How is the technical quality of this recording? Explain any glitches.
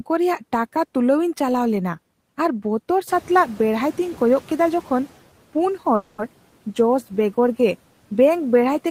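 Two glitches stand out in this speech recording, both in the middle stretch.

Noise suppressor catching up, 3.07 to 5.13 s: right around 3 s the room noise jumps by about 15 dB, and for roughly two seconds it comes through noticeably louder before sinking back by about 8 dB. That's the suppressor's noise estimate trailing the sudden change. It takes about 2.06 s to re-learn the new noise floor, so at first it treats the noise as part of the wanted signal and lets it through, then it clamps down. After the rise, the room noise sits about 23 dB under the speech.

Call audio freeze, 5.95 to 6.21 s: here the sound briefly smears into a fading buzz or hiss for about 230 ms instead of carrying on normally. There's no dead silence, just that stretched continuation of the last bit of sound. Then everything picks up exactly where it left off, with nothing dropped. The likely cause is packets arriving late and the jitter buffer running dry, with the receiver padding the wait. 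Because it resumes rather than skipping ahead, everything after that point ends up about 230 ms later than it would have been.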